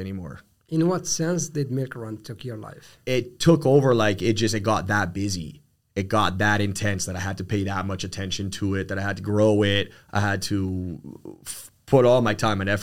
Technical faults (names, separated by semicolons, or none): dropped samples